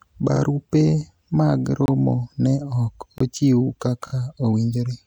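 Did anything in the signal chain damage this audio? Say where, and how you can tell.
Yes. Repeated frames appear at 0.36 to 0.41 s and at 4.07 to 4.12 s, which points to the codec or storage stage. In the first, a 52.2 ms stretch of speech plays once more straight after itself. In the second, a shorter 26.1 ms block plays three times in a row, which fits single compressed frames of about 1152 samples. Each repeat adds 52.2 ms to the clip. The decoder is fed the same frame data again, so the sound stutters.

Blocks of digital silence occur at 1.86 to 1.88 s and at 3.18 to 3.20 s, each 23.2 ms long, which fits a 1024-sample buffer and places the fault at the driver or buffer stage. Both times the speech drops abruptly to silence and returns with no fade, so each gap sounds like a brief hole. The pattern suggests the program missed its deadline to fill an output buffer and the device played out an empty one.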